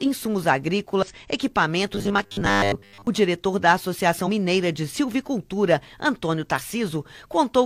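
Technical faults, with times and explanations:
1.03–1.05 s, 4.23–4.29 s and 6.55–6.61 s, damaged data in a compressed stream: brief glitches, as the decoder hits corrupted frames, loses sync and skips to the next header.
1.93–3.07 s, robotic sound from repeated short buffers: a rigid, metallic buzz at 100 Hz replaces most of the audio, likely from late data forcing repeats of a 10 ms buffer.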